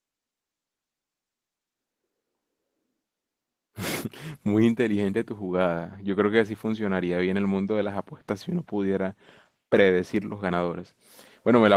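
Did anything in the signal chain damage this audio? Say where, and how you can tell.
No, nothing in the chain damaged this speech; the Opus voice compression, running in hybrid mode at about 20 kbps with full bandwidth kept, leaves only a light, expected coding texture, and no stage shows a fault.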